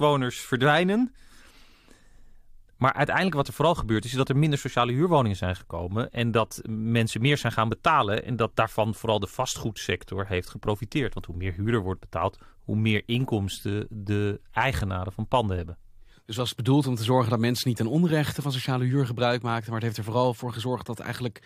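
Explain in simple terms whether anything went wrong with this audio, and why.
Nothing went wrong with this speech recording; there's no fault anywhere in it to explain.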